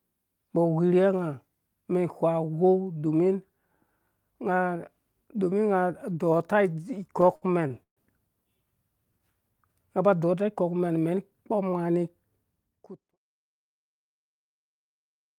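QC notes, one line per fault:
7.07–7.99 s, repeated stalls (stutter): late packets drained the jitter buffer eight times after "domi unga adɔɔta"; 271 ms of concealed fill makes the audio drag.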